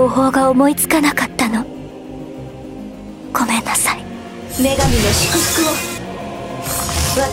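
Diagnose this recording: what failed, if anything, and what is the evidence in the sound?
Nothing in the recording points to a failure at any stage of the chain. There is no audible evidence of a fault anywhere in the sound.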